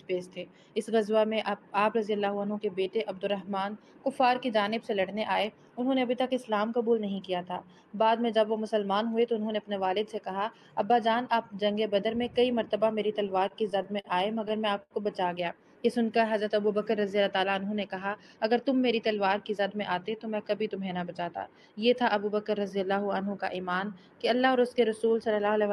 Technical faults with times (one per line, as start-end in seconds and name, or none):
13.27-14.07 repeated stalls (stutter)
14.83-14.94 short stall from a late packet
15.77-16.17 jitter buffer slow-down
18.15-18.69 jitter buffer speed-up